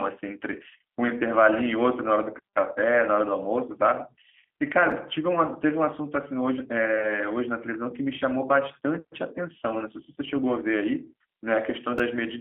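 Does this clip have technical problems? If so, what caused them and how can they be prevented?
Yes. A G.729 codec runs throughout the speech. The sound is confined to a narrow telephone band of roughly 250 Hz to 3.5 kHz, with nothing above 3.7 kHz, which fits a G.729A coder at 8 kbit/s. That coder rebuilds each 10 ms frame from a vocal tract filter, a pitch predictor and a few pulses, so the speech has a plainly audible rough, synthetic edge. Prevent this by carrying the call on a wideband or higher-bitrate codec.

Chunks out of order occur at 4.91 s and again at 11.98 s. Each time, a chunk about 5.33 ms long lands one chunk late and plays after the chunk that should follow it. Nothing is lost, but the order is scrambled and there are three hard joins, heard as a brief garbled moment. Prevent this by reordering packets in the jitter buffer by sequence number before they are written out.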